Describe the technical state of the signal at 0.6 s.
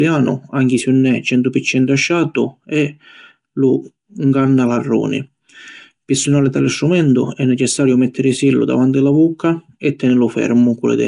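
At 0.6 s the speech has likely passed through Nellymoser compression, present across the whole clip: block coding with too few bits starves weak bands, which are filled with noise, fitting a rate near 44 kbps. The result is a rough, hissy halo, smeared underwater tone, and nothing above 10.7 kHz.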